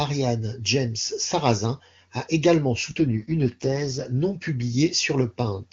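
From 3.00 to 4.06 s, just after "a également", the speech turns rough, raspy and synthetic, with the band kept and no gap. This is an AMR rate drop: the sound fits the AMR-WB (HD Voice) codec falling from 23.85 to 6.6 kbit/s.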